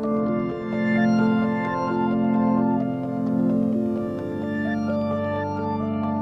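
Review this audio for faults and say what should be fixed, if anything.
Nothing here needs fixing; no faults were found.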